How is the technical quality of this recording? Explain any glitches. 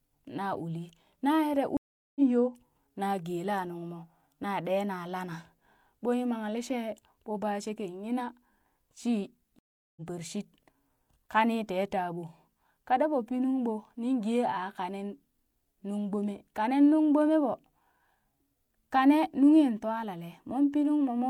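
The recording has two stream reconnect glitches. At 1.77 to 2.22 s and 9.59 to 10.01 s, speech stops for roughly 390 and 380 ms. A fresh decoder then resumes it about 200 and 300 ms further on. Unlike a plain dropout, which picks up where it stopped, these lose speech and join it later.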